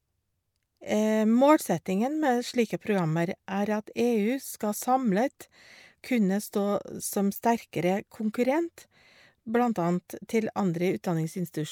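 Listening to this speech recording, nothing stood out as a technical problem at any point.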